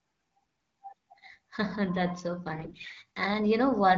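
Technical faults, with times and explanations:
2.52 to 3.02 s, AMR bit errors: for about half a second the speech turns hoarse, scratchy and gargly, though its pitch and loudness hold roughly steady. Around a tenth of the weakly protected bits in each frame arrive flipped while the checksum on the critical bits still passes, so the decoder misplaces its excitation pulses and mis-sets fine pitch, gain and spectral values. The span fits about 25 consecutive 20 ms frames, over a wideband link that sounds like AMR-WB at around 12.65 kbit/s.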